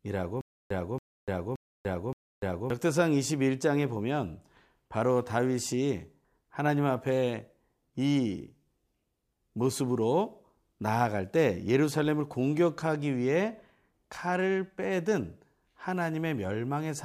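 Playback likely stalled at 0.41 to 2.70 s, replaying its last fragment each retry: a stutter with silent gaps, a 280 ms burst recurring every 0.57 s.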